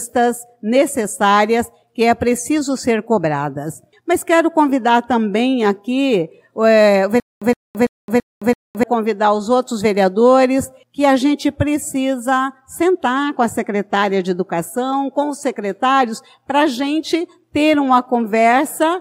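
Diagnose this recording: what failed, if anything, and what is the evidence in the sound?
Stutter with silent gaps from 7.20 s to 8.83 s: the same 117 ms burst of sound repeats five times, each followed by about 217 ms of dead digital silence, giving a steady 333 ms cycle. This is likely a playback or stream buffer underrun: each retry replayed the last fragment it held, then ran dry before fresh data arrived. The audio that belonged in that 1.6 s stretch never plays and is lost.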